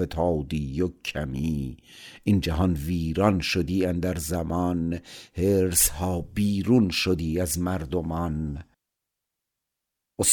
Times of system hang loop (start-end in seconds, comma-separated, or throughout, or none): none